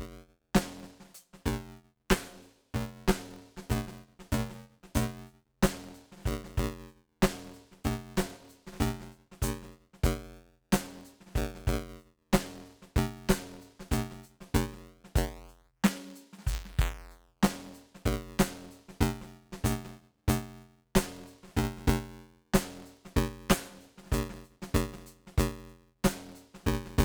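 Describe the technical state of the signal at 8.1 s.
At 8.1 s the music carries buffer tearing, which runs through the whole clip rather than appearing at that moment alone. The writer and the hardware reader of the ring buffer have drifted out of step and cross inside each period. About a third of every buffer replays audio from roughly ten milliseconds earlier, with hard joins at both edges. The result is a steady robotic buzz at 172 Hz, which fits a 256-sample buffer, heard wherever the music has signal.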